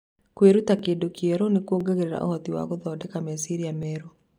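At 0.79, 1.81, 2.82 and 3.83 s there's a little stutter, once a second, from overlapping chunks: each new 1.0 s chunk starts 12 ms early, so that sliver plays twice. You hear it right before "kĩndũ kĩerũ nĩ" and again after "ũhoti wa".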